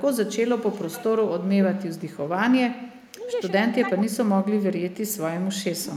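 From 0.58 to 1.04 s there's an echo leak: a faint copy of the speech trailing about 0.42 s behind, roughly 20 dB down. It's likely a far-end speakerphone whose echo canceller let some of its mic pickup through. It returns, quieter, at 1.78 to 2.30 s and 2.98 to 3.06 s. Right after, speech suppressed in double talk sets in at 3.08 to 3.28 s, dipping around 15 dB. The likely cause is the canceller ducking its own talker along with the loudspeaker echo while they overlap. It dips again, deeper at roughly 25 dB, from 3.87 to 4.17 s. The echo comes back faintly at 4.90 to 5.17 s, and a last, lighter dip of around 10 dB hits at 5.82 to 5.92 s.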